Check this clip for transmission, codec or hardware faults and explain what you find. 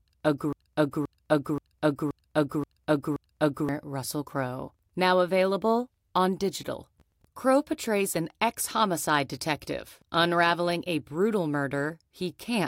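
A broken-record loop is present at the start of the speech. From 0.00 to 3.69 s, a fragment about 0.53 s long plays back to back, repeating six times, and it is already under way when the audio begins. The likely cause is a stall in the player, encoder or stream that kept re-sending the last fragment it held. Each repeat is identical, and whatever speech belonged in that span is missing.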